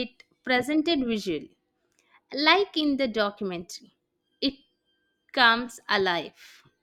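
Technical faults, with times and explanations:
No technical faults can be heard anywhere in the speech signal.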